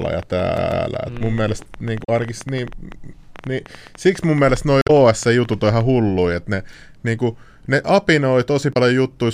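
From 0.02 s to 5.82 s a train of clicks ticks and pops over the speech and through its pauses, about nine per second at an uneven pace, some 50 in all and peaking about 5 dB above the speech. The clicks stop just before "hulluja että ne niinku". Such a run of near-identical pulses is likely interference from nearby equipment or a faulty connection or power supply.

From 0.57 s to 0.86 s there is a quick, even stutter, with one 144 ms slice playing twice with a brief mute at each jump. This is a CD stuck on one turn: a scratch sends the laser back one track at the same point on every rotation.

Short chirps and blips come at 2.01 to 2.09 s, 4.79 to 4.90 s, and 8.70 to 8.76 s, the last just after "ne niinku ne apinoi". These are damaged data in a compressed stream, where corrupted frames make the decoder lose sync and skip ahead to the next frame it can read.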